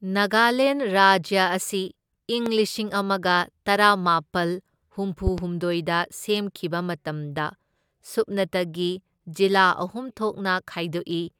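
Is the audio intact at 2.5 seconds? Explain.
No. A loud pop sits at 2.46 to 2.49 s, a single sharp burst lasting about 30 ms and rising roughly 10 dB above the speech. It is likely caused by a sudden voltage step or pulse, such as from a switch, a plug, static discharge or a driver glitch, entering the signal chain. The circuitry that follows shapes that pulse into a brief thump, and the speech continues unbroken underneath it.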